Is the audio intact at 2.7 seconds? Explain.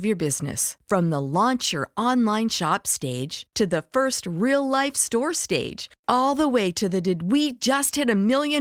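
Yes, at 2.7 seconds the speech is intact, with no dropout, click, distortion or other fault at that moment.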